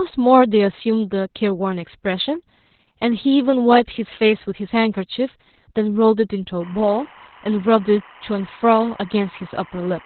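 A speech clip with heavy Opus voice compression throughout. Nothing is heard above about 4.3 kHz, so the voice is muffled, hoarse and slightly robotic, which fits narrowband SILK coding at around 8 kbps. From 6.60 s to the end there is timecode bleed. A steady chirping warble switches between tones near 1 and 2 kHz, well below the speech, consistent with 25-frame linear timecode leaking in from a neighbouring track or cable.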